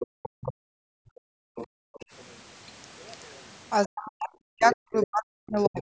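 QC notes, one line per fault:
0.00–0.54, 1.56–2.06, 4.63–5.06, 5.76–5.82 s: other side's voice leaking through. A second voice sits under the talker, roughly 15, 20, 10 and 25 dB down respectively. This is likely far-end loudspeaker sound the echo canceller left in the microphone. On a spectrogram, it appears as faint, separate harmonic traces overlapping the main speech.
0.07–1.94 s: background gated by the echo canceller. The room sound falls away while the loudspeaker plays, dipping by up to about 40 dB for roughly a second and a half in total. The canceller clamped the microphone. The waveform shows near-silent troughs in the noise floor, visible as gaps in the spectrogram's background haze.
3.86–5.85 s: speech suppressed in double talk. The talker's voice dips, falling by up to about 40 dB over roughly a second and a half. This is likely because both sides spoke at once and the canceller attenuated everything. 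The waveform envelope shows abrupt notches, and the spectrogram shows the voice weakening where it is turned down.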